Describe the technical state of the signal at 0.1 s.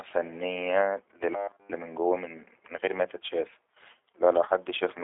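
At 0.1 s the speech carries G.729 codec damage throughout, rebuilt from coarse pulse excitation that fits 8 kbit/s, sounding rough and synthetic; a spectrogram shows nothing above 3.7 kHz.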